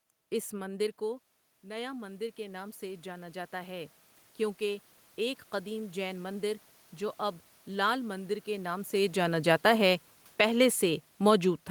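Automatic gain rising runs from 0.5 to 4.0 s. Just as the talker moves back and the input drops by about 15 dB, the gain control judges the level too low and climbs about 12 dB over three and a half seconds, so voice and room noise swell together.

Automatic gain falling follows from 8.93 to 11.49 s. After the talker moves around 8.5 s, the control reads the input as too loud or too noisy and eases its gain down by about 4 dB, letting the voice and background sink in step.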